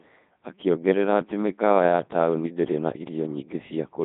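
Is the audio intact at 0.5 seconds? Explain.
No. At 0.5 seconds the speech is passing through a Codec 2 vocoder, and this lasts for the whole clip. The sound points to a very low rate, near 2.4 kbit/s. At that rate the waveform itself is not sent. Only pitch, voicing, loudness and a coarse spectral shape get through. The decoder rebuilds the speech from sine waves. The damage is heavy. The speech sounds robotic and buzzy.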